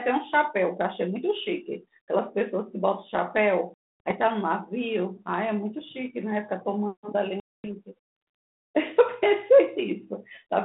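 At 3.74 s and again at 7.40 s, the speech drops into hard-edged silence. This is packet loss on an ADPCM call. The gaps last about 260 ms and 240 ms. The receiving decoder's predictor and step size lose track of the sender's. So speech returns slightly distorted, settling by 4.12 s and 7.72 s.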